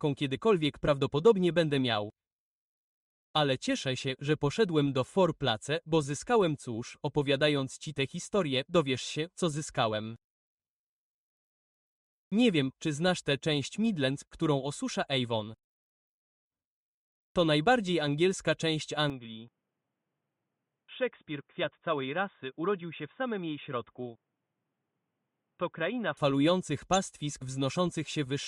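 At 19.10 s the sound abruptly turns dull and boxy. Nothing remains above 3.8 kHz. The level falls by about 5 dB, and faint new background noise appears. There is no gap at the change. The input likely switched to a poorer device. Full bandwidth returns at 26.17 s.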